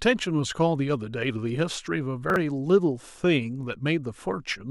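At 2.3 to 2.36 s the speech briefly jumbles: chunks out of order. One 20 ms chunk plays two chunks late, creating three hard joins. Unlike a dropout, no audio goes missing; the same material is simply reshuffled.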